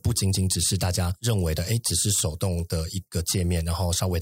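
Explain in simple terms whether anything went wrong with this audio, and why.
Nothing stood out as having gone wrong on a careful listen to this speech recording.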